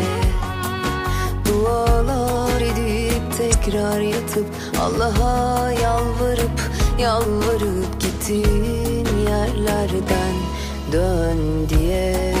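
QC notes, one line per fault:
3.52–3.55 s, corrupt frame decoded: bit errors damaged a few consecutive compressed frames, and the decoder played them without concealment. The misread gains and codes put energy at frequencies where the audio had none, so for about 25 ms a strong, unrelated artefact is heard in place of the intended content. It registers as a brief chirp, squeak, blip or burst of noise. The damage matches the short span of the affected frames.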